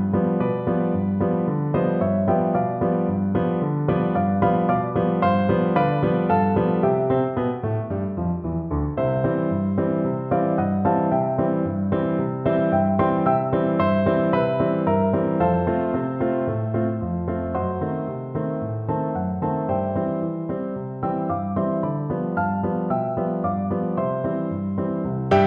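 No technical fault can be heard anywhere in the clip. There is nothing to place in time, as the sound runs on without any event that marks a problem.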